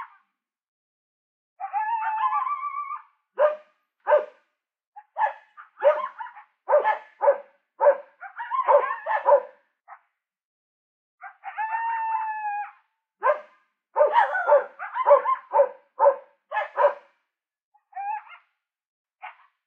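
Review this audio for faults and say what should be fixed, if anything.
No faults found in this audio; nothing needs fixing.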